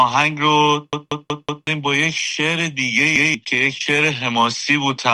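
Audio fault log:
0.93–1.67 s and 3.16–3.34 s, repeated buffer: late audio is covered by replaying one segment of about 0.19 s (fits an 8192-sample buffer). It plays four extra times, then once, causing stutters and losing roughly 0.7 s and 0.2 s. Waveform and spectrogram show identical blocks with vertical seams.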